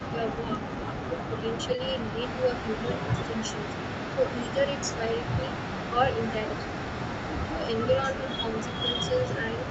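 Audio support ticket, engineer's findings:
Echo leak, 0.0–9.7 s: faint delayed copy of the speech trails the main signal by 254 ms, about 20 dB down, throughout. Likely residual echo from a far-end echo canceller passing loudspeaker pickup back up the path.
Distinguishing point: a discrete repeat at a fixed lag, not a smooth decaying tail as with room reverb. Both copies share the same 8 kHz band ceiling.

Speech suppressed in double talk, 0.07–1.45 s: speech level dips by up to roughly 10 dB, about half a second affected in total. Likely canceller suppressor misjudging overlap as echo and ducking the near talker along with it.
Speech suppressed in double talk, 2.14–9.70 s: same dipping, up to roughly 10 dB, recurring to the end.
Distinguishing point: gain pumping on the speech itself, no clicks or synthetic fill as with packet loss.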